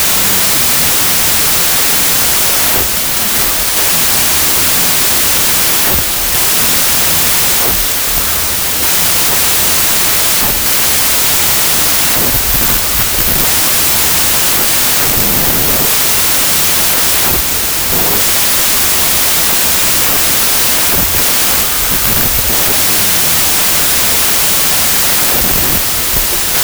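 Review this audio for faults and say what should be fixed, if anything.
Loud, hissing noise runs through the whole clip, with the speech buried underneath, slowed to about two-thirds speed and lowered in pitch by the same ratio. This is a wrong sample width fault. The slowdown to 0.667 fits packed 24-bit samples being read as 16-bit, which yields one and a half times as many values. Many of those values are built from mismatched bytes, so only fragments of the real waveform survive. Declare the sample format explicitly at every read and write, and check the file header against it, so both ends agree on bytes per sample.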